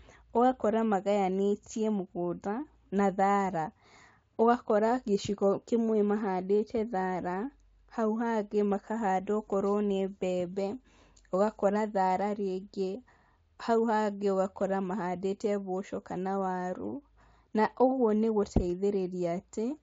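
The speech arrives without any audible technical fault, carried over a Speex coding path that is working as intended.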